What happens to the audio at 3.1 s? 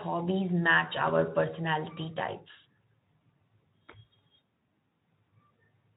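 Nothing goes wrong at 3.1 s: the speech there carries through intact, with only the light coding character of the Speex codec that runs throughout.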